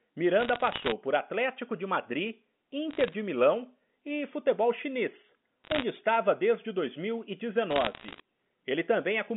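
Bit errors on a digital phone line show up as bursts of crackly ticks at 0.4–0.92 s, 2.91–3.14 s, 5.64–5.84 s (between "e futebol chinês" and "estava desde") and 7.71–8.2 s. Flipped bits in single samples of the A-law line, at roughly 0.5 to 1 percent of bits, pepper the speech with sharp clicks.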